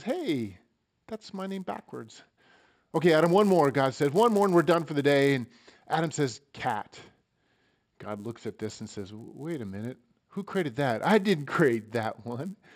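A speech recording where the resampler restarted on every block: each 10 ms block was converted from 16 kHz to 48 kHz in isolation, leaving edge errors that produce a 100 Hz buzz throughout, audible only while signal is present.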